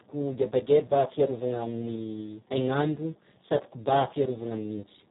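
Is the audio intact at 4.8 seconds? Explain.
No. At 4.8 seconds, as throughout the clip, the speech carries heavy Speex codec damage: starved CELP excitation makes it hoarse and near-robotic, which fits a setting around 4 kbps, with nothing above 3.8 kHz. A plain low-pass would dull the sound without this buzzy roughness.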